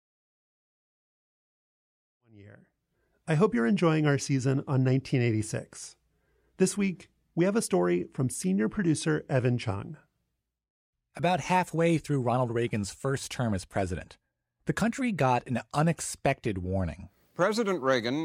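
No faults found in the speech; the smooth fade-in from around 2 s, reaching full level by 3.3 s, is ordinary editing.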